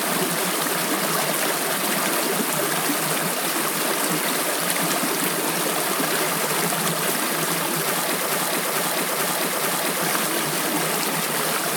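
At about 8.26 s a broken-record loop kicks in: a 439.5 ms fragment repeats four times back to back until 10.02 s, likely a stalled player resending its last buffer.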